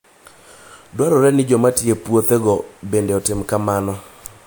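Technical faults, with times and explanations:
No technical faults can be heard in the speech signal.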